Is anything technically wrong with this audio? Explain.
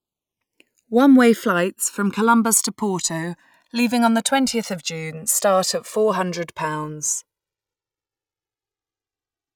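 Yes. The channels drift apart across the whole speech clip. They come from devices running on separate clocks, off by roughly 300 ppm. The delay between them slides, reaching around 3 ms by the end. Summed to mono, comb notches sweep slowly, heard as gradual flanging.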